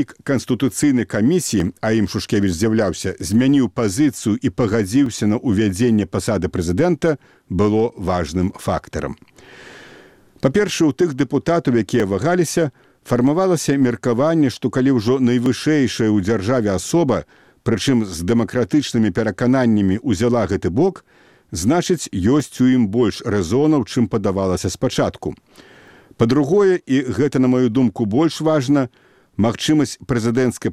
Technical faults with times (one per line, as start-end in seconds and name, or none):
1.60-29.34 clock drift buffer slips